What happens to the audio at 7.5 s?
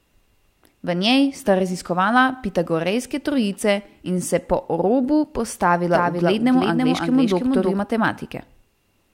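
A doubled audio track runs from 5.92 s to 7.80 s, so at 7.5 s the speech is heard twice: a full-band copy trails the original by roughly 300 ms at around 5 dB lower. The likely cause is a second capture of the same signal through a slower path, or an edit holding two copies out of step. The echo has no decay or room colour, and it cuts in and out abruptly at both ends.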